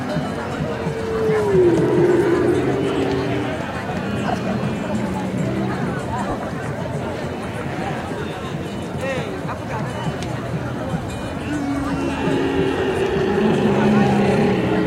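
Lost LE Audio frames occur from 6.30 to 6.34 s, a 40 ms gap consistent with four 10 ms frames missing from the Bluetooth LE Audio stream. With no data for that stretch, the LC3 decoder filled in by reusing the last spectrum it had received, flipping the signs of its components at random and beginning to fade it. Any tonal content in the sound turns into a brief, noisy smear before the signal returns.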